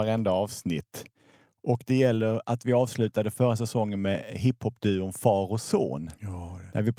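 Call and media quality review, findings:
No faults found on this one, nothing in the speech calls for a ticket entry.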